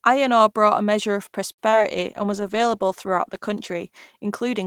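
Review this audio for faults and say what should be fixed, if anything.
Short stall from a late packet, 1.51 to 1.60 s, just after "brought a measure of": a packet arrived late, the jitter buffer emptied, and the receiver held the last sound for 67 ms, then resumed without losing anything, leaving playback 67 ms further behind. A jitter buffer sized for this network's arrival spread would absorb the delay.

Short concealed packet loss, 1.70 to 1.82 s: 20 ms of audio never reached the decoder in time, so the receiver extended the preceding sound for 23 ms and blended back, giving a brief smear and adding roughly 15 ms of delay. Forward error correction or redundant packets would let the receiver recover the lost audio.

Call bitrate drop, 1.91 s to the end: the bandwidth estimate fell and the encoder went from 40 to 14 kbps, holding its lowest rate for about a second, so the sound turns coarser and rougher for the rest of the clip. 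A steadier bandwidth estimator with a higher minimum bitrate would prevent this.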